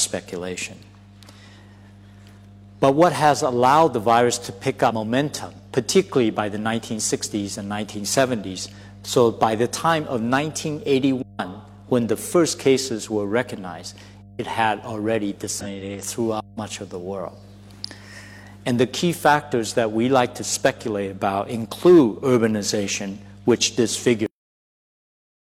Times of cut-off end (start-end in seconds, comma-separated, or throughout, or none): 24.26-25.54